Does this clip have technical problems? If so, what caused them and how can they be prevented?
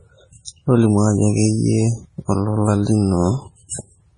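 Yes. Throughout the speech there is heavy watery, swirly smearing, likely from MP3 compression at a very low bitrate, around 24 kbps. A spectrogram shows nothing above 10.5 kHz and weak components flickering between frames as shredded patches. Prevent it by encoding at a higher bitrate or with a lossless format.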